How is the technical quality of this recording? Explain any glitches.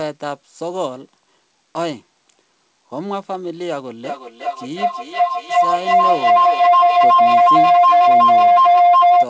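The recording is spoiled by feedback howl from 4.04 s to the end at 9.29 s. The speech passes through a call path with nothing above 8 kHz, which fits G.722. In the feedback howl, a microphone-to-loudspeaker loop gains level on each trip. It swells to a tone around 700 Hz, pulsing roughly every 400 ms, and peaks about 12 dB above the speech. Unlike echo, its repeats grow rather than fade.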